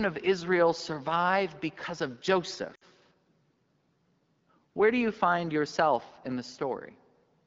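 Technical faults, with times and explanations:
2.75–2.84 s, lost AMR speech frames: for about 60 ms the speech stops sounding fully live. The length suggests three consecutive 20 ms frames failed their error check. The decoder filled the gap by reusing the last good pitch and vocal tract settings at falling gain, so the sound smears and thins rather than cutting out cleanly. The clean wideband sound around it is consistent with AMR-WB near 12.65 kbit/s.
6.01–6.32 s, processor overload crackle: across roughly a third of a second, the sound is broken by a short series of tiny hard-edged dropouts, heard as a gritty crackle riding on the speech. The processor was falling behind its deadlines for very small buffers, each around 3 ms long, and about seven of them were missed. Each missed buffer left silence, and the abrupt edges of those gaps create the crackle, which ends once the load eases.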